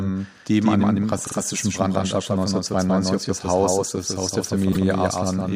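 A speech recording carries a doubled audio track from start to finish: a second, full-band copy sits roughly 150 ms behind the original and about 5 dB quieter. It likely comes from the signal being captured twice by a slower path. Unlike room echo or reverb, the copy has no decaying tail and no room colour. It is simply the same sound again, clean and at a fixed offset, giving a slapback effect. The clip also has repeated frames in two places. Right after "die eben an dem", from 1.26 to 1.36 s, a 48 ms fragment plays two extra times and adds 96 ms. From 4.72 to 4.86 s, a 144 ms block plays once more and adds 144 ms. These repeats differ from the doubled track because the audio is replayed in sequence rather than layered over itself. They sound like a stutter that stretches the recording.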